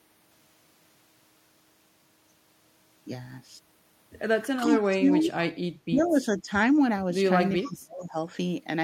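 A speech clip from a call that runs into double talk trouble from about 4.6 s on. The voice gets ducked during stretches at 4.64–4.71, 4.91–5.32, 5.86–6.51 and 7.61–8.3 s. The first dip is slight, roughly 5 dB. The middle two go down about 15 dB, and the last one nearly cuts out at around 30 dB down. That's speech suppressed in double talk, likely the echo canceller clamping down while both sides were talking. There's also echo leak at 4.74–4.89, 6.05–6.1 and 7.57–7.69 s: faint scraps of the voice coming back about 400 ms late, at about 15, 30 and 20 dB below the speech. That's likely the far end's loudspeaker pickup getting past its canceller and returned down the line.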